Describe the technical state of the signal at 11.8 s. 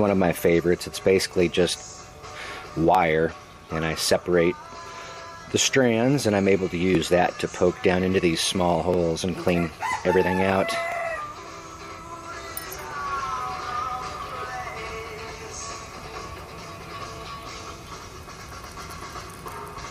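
At 11.8 s the signal is intact, with no audible technical fault at that moment.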